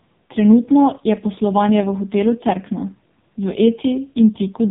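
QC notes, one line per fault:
Throughout: AMR narrowband mobile codec. The speech is squeezed through a mobile speech coder that rebuilds each short frame from a vocal-tract filter excited by a few sparse pulses, and the damage is heavy. Nothing reaches above roughly 3.7 kHz, so sibilants and consonant detail are dull and boxed in. At this starved bit budget, which fits the lowest AMR-NB mode of about 4.75 kbps, the voicing turns buzzy and synthetic, with a coarse, robotic edge.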